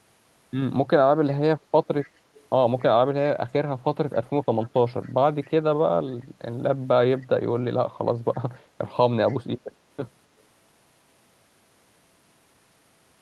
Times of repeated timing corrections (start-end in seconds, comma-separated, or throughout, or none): none